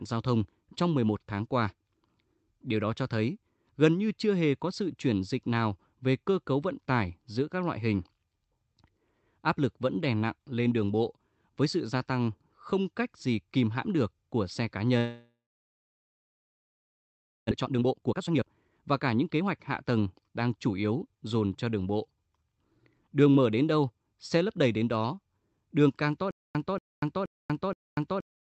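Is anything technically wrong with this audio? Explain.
Yes, there are three separate problems, all in the second half of this speech clip.

From 14.97 to 17.53 s there's what sounds like a long network dropout. The last sound carries on briefly as a fading buzz or hiss, then about 2.1 s of silence, so roughly 2.5 s gets papered over. Speech resumes mid-flow with about 1.6 s simply gone. The likely cause is no packets arriving at the receiver, which then had to invent something to fill the hole.

Right after that, from 17.54 to 21.27 s, you get a jitter buffer speed-up. The speech runs at about 124% speed but keeps its normal pitch, so it sounds rushed. After the dropout, the receiver was sitting on roughly a second of extra delay. It works that off by snipping out tiny pitch-period-sized slices over and over until it's trimmed about a second.

From 26.31 s to the very end there's a stutter with silent gaps. 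A 0.23 s fragment replays four times, each followed by about 0.24 s of dead digital silence, so it repeats every 0.47 s. That's likely the stream stalling and the player re-serving its last chunk on each retry. Whatever should have played there never shows up.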